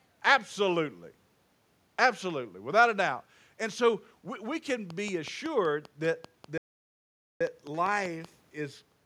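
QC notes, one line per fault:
4.70–8.26 s, train of clicks: regular ticking about 5.2 per second after "so we we", roughly fifteen pulses; likely interference, faulty connection or power supply.
6.58–7.41 s, playback stall: sound cuts out mid-flow for about 0.83 s, likely the player starving for data or its thread blocking.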